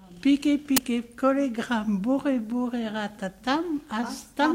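At 0.77 s a short, harsh burst of digital noise cuts in, lasting about 12 ms. This is an uninitialised buffer: one 512-sample block was played out before any audio was written into it, so leftover memory came out as samples. A click or dropout is different, because it is not this loud or noise-filled.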